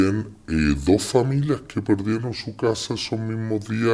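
From the start to the end, there's a wrong sample rate: the audio runs at about 0.69 times speed and sits roughly 6.5 semitones low, which fits 32 kHz material played back at 22 kHz.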